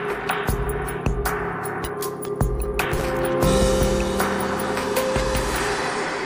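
At about 2.81 s there's a burst of processor overload crackle that runs until roughly 3.01 s, so about a fifth of a second. The machine apparently couldn't finish its audio buffers in time, and missed them back to back. Each miss just drops a chunk, which leaves a hard-edged skip rather than any repeated material. The spacing of the ticks points to buffers of around 10 ms, with something like fifteen of them lost, and together they read as a gritty tearing that stops once the load clears.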